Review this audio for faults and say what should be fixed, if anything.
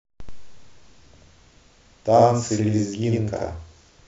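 Channel delay (doubling) runs throughout: one channel lags by 85.3 ms, which fits a 4096-sample buffer, so the mono sum plays the speech twice as an equal-level slap echo. Align both channels to a common clock before summing to mono.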